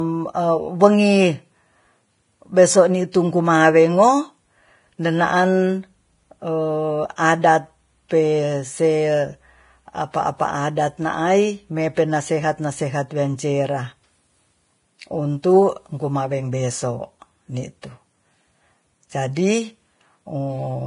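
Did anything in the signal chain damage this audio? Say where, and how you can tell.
Yes, at the codec stage. Across the whole speech clip, nothing survives above 10.6 kHz, and the remaining treble sounds heavily damaged, with hissy, grainy sibilance and a roughened edge on the voice. This is likely Vorbis compression at a low bitrate, around 28 kbps. The encoder lowered its cut-off to save bits and quantised the upper residue so coarsely that fine spectral detail turned into noise of similar energy, which is what gives the grain.

The same codec also causes pre-echo from 3.12 to 3.14 s, a short hiss lasting about 23 ms just before a sharp onset, which sounds softened. A transform coder spreads its quantisation noise evenly across each block. When a loud attack arrives late in a block, noise sized for that attack also fills the quiet stretch before it, smearing the onset backwards in time.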